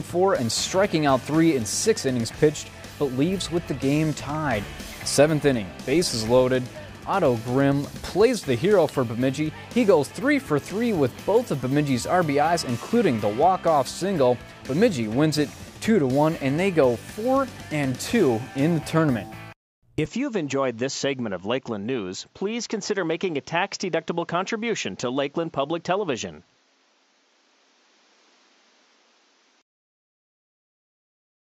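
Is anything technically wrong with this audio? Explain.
Yes. From 20.06 to 29.62 s the audio passes a narrower band and gains faint new background noise, with no gap or level jump, likely from an input switched to a poorer device.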